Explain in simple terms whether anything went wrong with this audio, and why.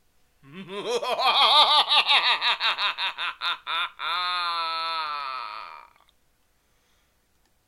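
From 0.12 s to the very end, a soft, steady rattle runs under the sound. These are clock slip clicks. Two devices likely ran on unmatched clocks, off by about one part in a thousand, so a single sample slipped roughly every 0.02 s.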